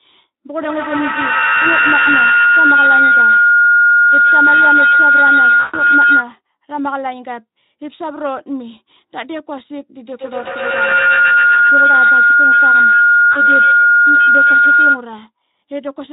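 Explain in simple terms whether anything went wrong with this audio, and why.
Yes, two things went wrong.

The first is feedback howl, from 0.55 to 6.38 s and again from 9.96 to 15.11 s. Two devices in the same room were on the call, so sound from a loudspeaker went back into a microphone and came round louder each time. It becomes a shrill tone around 1.5 kHz that pulses about ten times a second. A steady electrical hum doesn't do this. This howl swells and throbs until the loop is broken, and it ends up louder than the speech.

The second is VoIP packet loss concealed by the speech codec, at 5.60 to 5.82 s, 10.43 to 10.50 s, and 13.31 to 13.41 s. Chunks of the signal never arrived, about 140 ms of them in the first gap and 20 to 40 ms in the others. The decoder filled each gap by stretching the last bit of sound it had, so you hear a buzzy smear that fades instead of a clean silence or click. 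The voice then stays weak for a moment after the signal comes back. The Speex codec carrying the call adds only a light roughness of its own.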